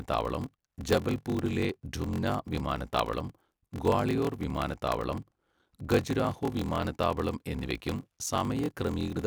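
Speech with a block size mismatch (padded) throughout: each short block is topped up with zeros, giving a 43.1 Hz buzz, which fits a 1024-sample read block, and playback at 0.861 times speed. The waveform shows regular flat gaps, and the spectrogram shows evenly spaced vertical silent stripes.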